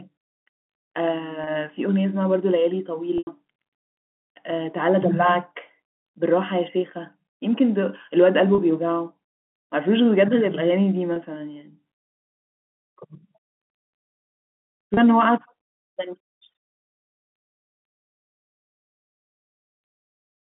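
Packet loss with pitch repetition at 1.44, 3.18, 8.55, 11.13 and 14.94 s: the receiver loops the last pitch cycle to bridge each gap. The 30 ms gaps sound like a brief buzzy hold. The 90 ms gap at 3.18 s fades toward silence. On a spectrogram, each gap shows frozen, repeating harmonics. The waveform shows identical periodic cycles, all within the telephone band.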